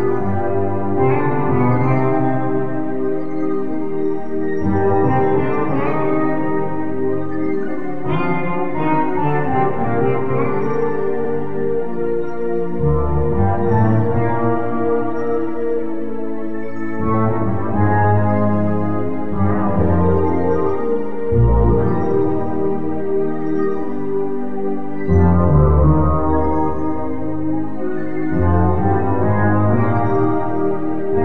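The audio has repeated frames at 11.24 s to 11.33 s. A 92.9 ms block, which fits four compressed frames, plays twice in a row, giving a brief stutter and lengthening the clip by 92.9 ms. A spectrogram or waveform would show the same short patch twice, back to back.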